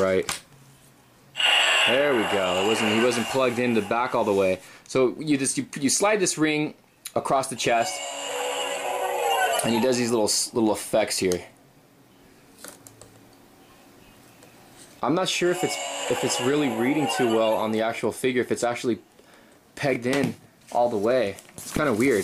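A short run of chunks out of order sits at 19.93 to 19.96 s: one 5.8 ms chunk arrived late and plays three chunks after its proper place. Nothing is lost, but the misordering leaves three hard joins, heard as a brief jumbled flicker.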